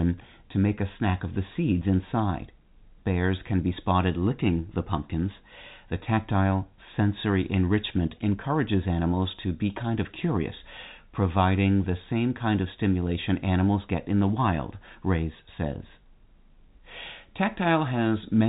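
No technical faults present.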